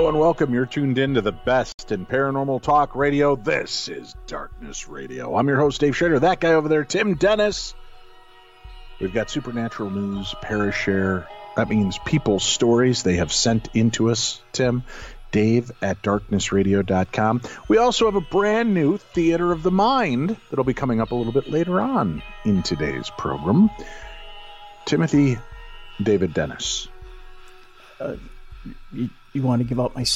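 Separately encoded pieces of this audio were joined without trimming the encoder's start-up delay and final-frame padding, leaving a gap at a join of encoded pieces. A silence of about 68 ms opens from 1.72 to 1.79 s, with edges smeared by the codec, before the sound resumes where it stopped.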